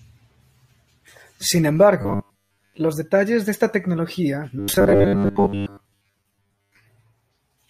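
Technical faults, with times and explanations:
2.02–2.79 s and 4.59–6.79 s, robotic sound from repeated short buffers: the speech becomes a rigid metallic buzz at 100 Hz, ending before and resuming after "detalles de esta tecnología". Audio likely arrived too seldom, so a 10 ms segment was looped over most of each stretch.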